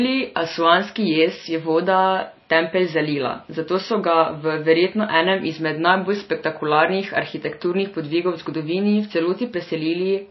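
Throughout, likely MP3 compression at a bitrate that fits 24 kbps starves the speech of bits: nothing survives above 5.8 kHz, and a watery swirl is plainly audible.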